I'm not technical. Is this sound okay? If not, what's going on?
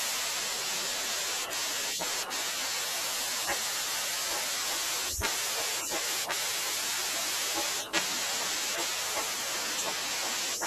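No. In this speech clip there are two sharp ticks, one at 1.53 seconds and another at 8.02 seconds. These are bit error spikes: a single digit in the stored or transmitted audio got flipped by mistake, so for a split instant the sound jumps to a wrong value and snaps straight back. That instant jump is what makes the click.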